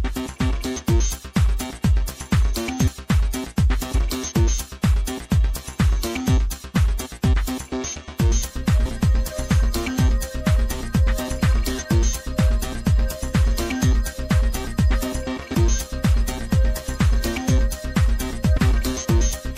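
The whole track has that watery, swirly top end and dulled treble of MP3 compression, likely from a low bitrate around 64 kbps. At 8.85, 15.53 and 18.56 s, compressed frames were skipped. The audio jumps ahead by roughly 150, 200 and then 300 ms, each join a quick smeared blip rather than a click.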